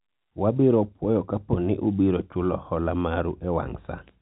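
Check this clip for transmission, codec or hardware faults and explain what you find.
No transmission, codec or hardware faults turn up anywhere in the clip.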